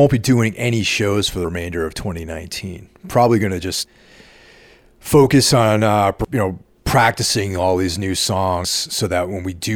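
Short skips at 1.45 s after "doing any shows for", 3.85 s after "going to", 6.25 s before "you know practicing all", and 8.65 s. This is audio missing between chunks: about a tenth of a second vanishes at each join, likely from 2.5-second processing chunks.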